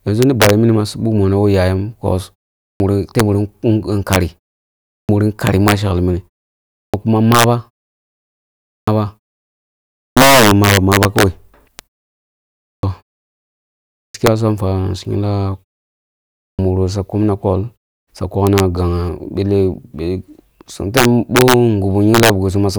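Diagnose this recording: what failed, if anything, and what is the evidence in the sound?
Integer overflow sits in the sample-format or gain stage and runs through the whole clip. The loudest speech peaks are driven about 6 dB past full scale. Instead of being held at the limit, they wrap to the opposite sign and jump across the entire range. Only a small fraction of samples, around half a percent, are affected. Each one produces a hard, violent crack on loud syllables that is far sharper than ordinary clipping.

A clipped start after a pause points to the playback device powering down in silence and relocking late. Speech resumes abruptly, missing roughly 130 to 155 ms of its onset, at 2.65, 4.94, 6.8, 8.73, 10.02, 12.7, 13.99 and 16.44 s, after gaps of 0.38 to 1.11 s. Examples are the entry after "yayam bos" and the one after "ma sheklini", which leads into "kuma maba".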